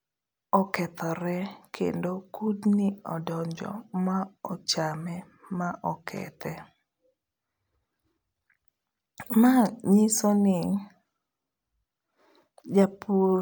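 Nothing goes wrong anywhere in this speech recording, so there's no technical fault to point to at any moment.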